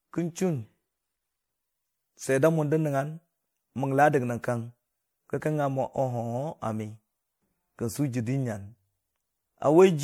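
Throughout the speech, generation loss smears and hollows the sound, with a swirly, watery texture and blurred consonant onsets. It is likely from repeated MP3 encoding, around five passes at what sounds like about 96 kbit/s. A single pass at that rate would not sound this smeared and hollow.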